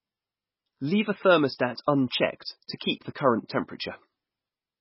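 Throughout, the speech sounds watery and swirly with smeared attacks, likely heavy MP3 compression. A spectrogram shows nothing above 5.5 kHz and patchy holes flickering below.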